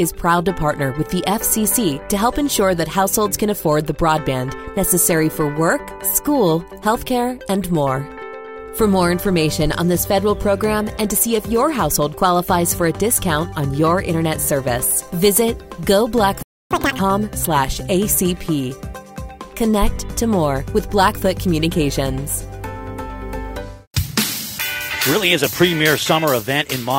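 A playback stall begins at 16.43 s: the sound cuts out mid-flow and the output stays silent until 16.71 s, a gap of about 0.28 s. The player most likely ran short of data or had its audio thread held up, so nothing reached the output until it recovered. When the sound returns, it resumes from the point where it stopped rather than jumping ahead.

Catch-up at higher speed follows immediately, from 16.71 s to 16.99 s. To win back the time lost in the stall, the player resamples its backlog and runs it at 2.0 times normal speed. Because resampling changes speed and pitch together, that stretch sounds hurried and noticeably higher, nearly an octave up, before it snaps back to normal pace and pitch once the delay has been recovered.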